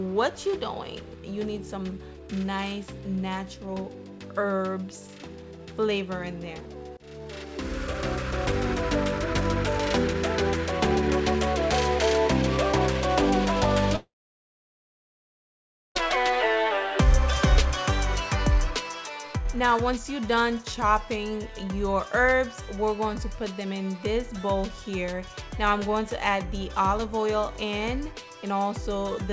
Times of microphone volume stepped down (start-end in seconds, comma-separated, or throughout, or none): none